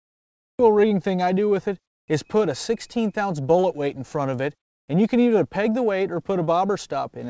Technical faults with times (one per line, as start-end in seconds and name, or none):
0.00-0.59 cut-off start